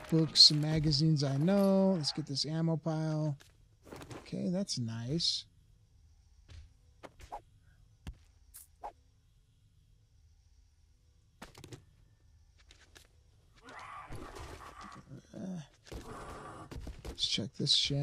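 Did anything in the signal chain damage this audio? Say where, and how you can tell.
No, nothing in the chain from capture to playback audibly damaged this audio, and no stage leaves a mark that would point to a fault.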